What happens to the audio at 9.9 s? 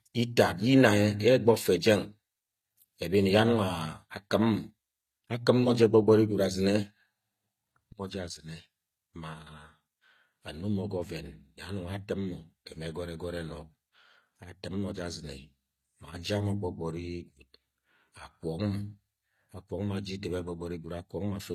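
HE-AAC compression is plainly audible at 9.9 s, as it is across the whole clip. The treble is most likely rebuilt by spectral band replication, copying lower bands upward under a coarse envelope, which fits a low bitrate around 24 kbps. Mismatched harmonics leave s sounds gritty, metallic or lispy.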